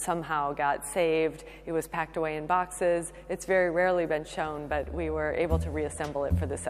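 From the first moment to the end there's mains hum sitting under the sound, a steady low drone locked to 50 Hz with a bit of harmonic buzz riding on top. It's roughly 25 dB below the programme. That's the power line leaking into the signal path, most plausibly through a ground loop between connected gear or a transformer sitting too close to a cable or input.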